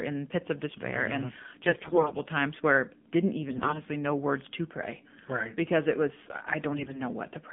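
It's a speech clip that has clearly been through the AMR narrowband mobile codec the whole way: the band sits at roughly 150 Hz to 3.5 kHz, and the voice comes out buzzy and synthetic, which fits one of the lower modes, around 7.4 kbps. On top of that there are three bursts of AMR bit errors, at 1.64 to 2.17 s, 3.48 to 3.80 s and 6.72 to 7.02 s. In each one the pitch and level hold, but the voice turns hoarse and gargly. That's the sound of corrupted low-priority bits scattering the excitation pulses, and the last burst is a bit milder than the first two.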